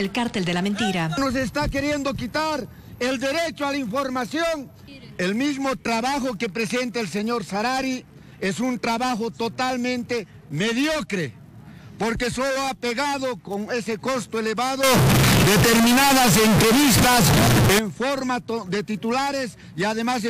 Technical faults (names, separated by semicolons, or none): float read as integer